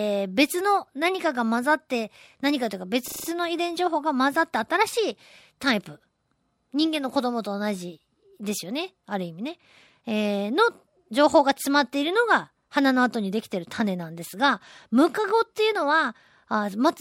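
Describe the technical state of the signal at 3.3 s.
A system hang loop runs from 3.08 to 3.28 s, just before 3.3 s: the driver stalled while the hardware replayed a single 40 ms stretch of its ring buffer five times, giving a 25 Hz buzz before the speech resumes with essentially nothing lost.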